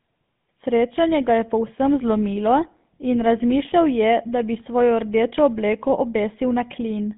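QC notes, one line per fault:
Throughout: GSM full-rate codec. The speech carries a buzzy, gravelly roughness. Sparse regular pulses drive a modelled vocal tract here, which fits the 13 kbps GSM full-rate coder. The band runs from about 150 Hz to 3.6 kHz, so the top sounds dull and boxy.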